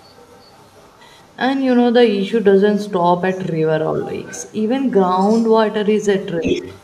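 A faint second voice sits under the speech from 0.0 to 1.36 s and returns in scraps at 1.73 to 1.78 s, 3.31 to 3.39 s, 4.01 to 4.64 s and 5.21 to 5.5 s. From 6.21 s to the end it rises almost to the talker's level. This is the other side's voice leaking through, likely loudspeaker echo the canceller failed to remove.

Between 6.42 and 6.64 s, the talker's voice dips by a few decibels in brief pieces. This is speech suppressed in double talk, likely as the canceller turned down both overlapping voices.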